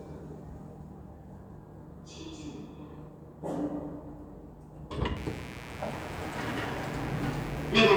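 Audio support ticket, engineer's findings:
Mains buzz from 5.16 s to end. Steady raspy 60 Hz buzz, harmonics into kilohertz, about 15 dB under the sound. Dimmer or rectifier switching spikes, twice per cycle, leaking through poor shielding.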